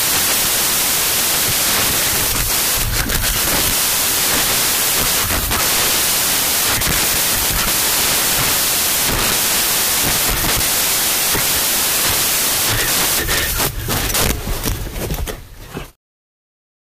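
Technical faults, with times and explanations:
Throughout: samples built from the wrong bytes. Each sample has been put together from its bytes in the wrong way: off by one byte, in swapped order, or at the wrong alignment. The small, rapidly changing low-order bits end up as the most significant part of every value, so the real waveform is buried under loud, harsh broadband noise.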